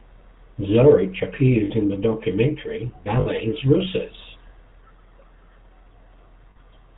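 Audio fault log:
throughout, GSM full-rate codec: The speech has a plainly audible buzzy, gravelly roughness and no content above 4 kHz, which fits a 13 kbit/s encoding. The codec models the vocal tract and drives it with sparse, regularly spaced pulses, so the excitation's fine detail is lost.
1.64–1.71 s, 3.20–3.27 s, 6.50–6.57 s, lost GSM frames: Each gap of about 60 ms is a brief rough, metallic ring in place of the sound. The first comes just before "in the documentary" and the second just after "in the documentary". The decoder repeats the last good frame's settings, which fits three missing 20 ms frames each time.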